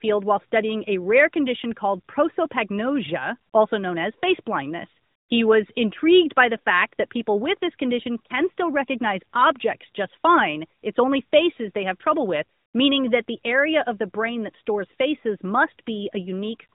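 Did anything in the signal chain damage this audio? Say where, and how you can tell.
No damage from the chain.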